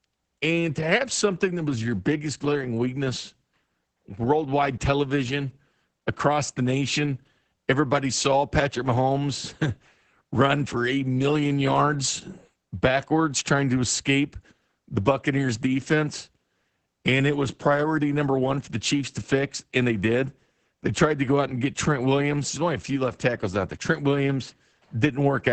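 Opus voice compression runs throughout the speech. Nothing survives above about 8.9 kHz. SILK's coarse excitation coding leaves it muffled, hoarse and slightly robotic, which fits a bitrate near 10 kbps.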